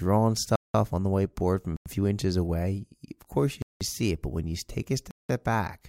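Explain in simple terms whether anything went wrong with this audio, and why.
The speech cuts out abruptly four times: 0.56 to 0.74 s, just before "on the whiteboard from"; 1.77 to 1.86 s, between "the whiteboard from a" and "few inches away of"; 3.62 to 3.81 s; and 5.11 to 5.29 s, after "when you take a". Each is a block of digital silence, about a fifth of a second long (the second one half that). The playback software likely fell behind and sent zeros instead of sound.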